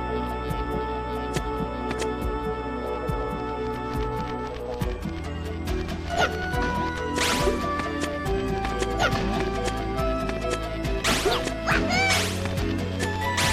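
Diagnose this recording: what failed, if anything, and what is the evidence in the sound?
The analogue wiring is where this failed: USB bus current is leaking into the audio path through shared power or ground, producing USB whine. It runs the full length of the recording as a fixed-pitch tone at 8 kHz, with its strongest component at the 16 kHz harmonic, sitting roughly 30 dB below the signal. An 8 kHz fundamental matches the 125-microsecond microframe rhythm of a high-speed USB link, so each burst of bus current is being heard as tone.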